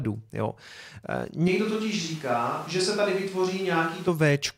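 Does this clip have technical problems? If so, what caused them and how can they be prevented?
Yes. From 1.48 s to 4.08 s the speech abruptly turns roomy and hollow, with thinner bass, and snaps back just as suddenly. This is a switch to a distant microphone, most likely a fallback to a camera or room mic when the close one dropped out. On the waveform the envelope shrinks by roughly 5 dB and the gaps between syllables fill with a noise floor around 25 dB below the speech. On the spectrogram low frequencies fade and reverberant smearing blurs word edges. To prevent it, monitor the close mic's feed and connection during recording, and keep a second close backup mic running.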